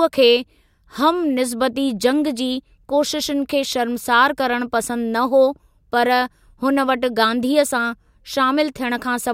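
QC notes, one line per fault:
1.82–2.28 s, CD scratch ticks: four short ticks in quick succession, roughly six a second, each well under a millisecond long. That regular spacing is the giveaway. A scratch or blemish on the disc passes under the laser once per revolution and wipes out more data than error correction can rebuild, so the player patches or mutes a tiny run of samples on each pass. Every patch comes out as a tick over the speech.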